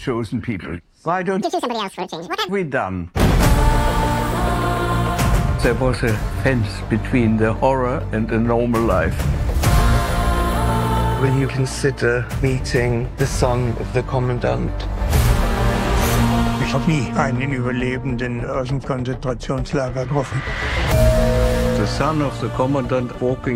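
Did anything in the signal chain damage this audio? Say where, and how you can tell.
Yes: audio read two samples at a time (double speed), from 1.42 to 2.49 s, at the sample-format conversion stage. The sound runs at 2x speed and jumps an octave (12 semitones) higher, because pairs of samples were consumed as single frames.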